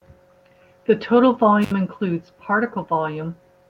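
A recording of speech with a single short dropout: between 1.62 and 1.72 s the sound cuts out abruptly, with a crackle at the start and end of the gap and faint hiss in between, the line itself open for about 62 ms. That pattern is an intermittent contact, where a loose cable or plug briefly loses its connection, so the signal vanishes while the noisy, unstable contact surfaces produce the crackles as it breaks and remakes.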